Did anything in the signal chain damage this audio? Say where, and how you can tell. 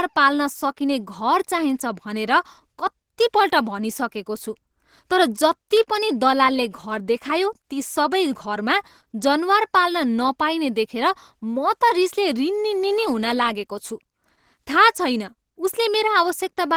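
Yes. The codec stage has left its mark across the whole clip: the speech has the hoarse, muffled and grainy texture you get when Opus is squeezed hard, likely at a low rate around 16 kbps. That sound points to the encoder running in its hybrid speech mode, where the lower band is coded as speech and the top is filled in from band energies. The damage is plainly audible throughout.

There are also two dropped samples, one at 6.30 s and another at 10.66 s. Each is a single sharp click, showing as a thin vertical line through the spectrogram, with no gap you could actually hear. A couple of samples went missing from the stream, so the waveform jumps straight to a later value. That's likely a driver or buffer hiccup rather than the codec.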